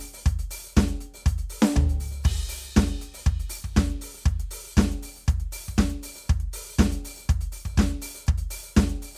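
No technical faults can be heard anywhere in the music.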